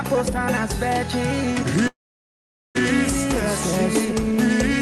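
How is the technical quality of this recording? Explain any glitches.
The recording has one clear glitch, a call audio freeze from 1.87 to 2.77 s, and the sound carries the band-limited character of a call codec, with content stopping around 12 kHz, consistent with Opus at roughly 32 kbps. During the freeze, the last sound continues briefly, then drops to near silence for about 0.8 s. This is likely from delayed packets draining the jitter buffer. When they arrive, playback resumes where it stopped, so the audio is delayed by about 0.9 s with nothing lost.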